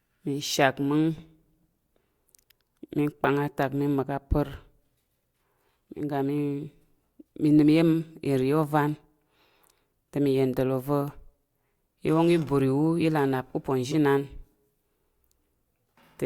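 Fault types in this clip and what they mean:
corrupt frame decoded: damaged bits in the compressed stream were decoded as if valid, so misread gains and codes put energy where the speech had none. At 3.24 s, just before "atak mi", a loud error across a few frames peaks near -5 dBFS. At 13.91 to 13.95 s a quieter error fills about one frame. A spectrogram shows each as a brief vertical smear of misplaced energy, and the waveform shows a short spike.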